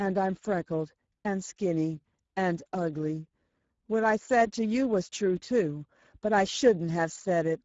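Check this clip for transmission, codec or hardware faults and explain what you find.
One fault runs throughout: Speex codec damage, plainly audible. The speech turns hoarse and noisy because a low setting near 10 kbps starves the CELP excitation. Nothing lies above 7.7 kHz, and the top band is noise-like fill, not the clean dulling of plain low-pass filtering.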